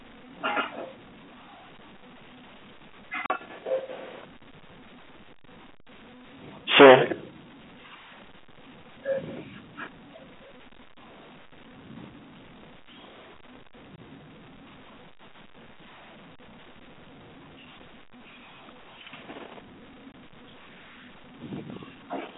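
A speech recording carried over a G.711 telephone line, whose 250 Hz to 3.4 kHz band is audible throughout, with two kinds of fault. Packet loss filled with silence cuts dead holes at 3.26–3.30 s (40 ms), at 13.97 s and at 20.12–20.14 s (20 ms), which fits lost 20 ms packets. Unlike clipping, these are true gaps with hard edges, not distortion. Hard clipping flattens peaks at 6.46–7.15 s, driven about 20 dB over, giving harsh fuzz. Milder overloads of about 3, 1 and 2 dB at 9.24–9.38 s, 11.99–12.04 s and 21.42–21.83 s crackle only on peaks, adding upper harmonics rather than removing sound.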